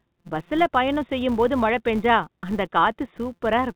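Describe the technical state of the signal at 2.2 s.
At 2.2 s there's clock drift between sender and receiver, running the whole clip. The sender's clock is a few percent fast, so the jitter buffer keeps overfilling and has to shed audio.

That's why 2.2 s falls inside the stretch of repeated timing corrections from 0.05 to 3.75 s. The receiver keeps trimming small slices to absorb speech arriving at about 104% speed.

There's also a filter restarted on every block throughout. It drops its state each block, which fits a 256-sample block, so every block starts with a small transient, giving a 172 Hz buzz that rises and falls with the speech level. All of this sits on a G.711 call path with nothing above 4 kHz.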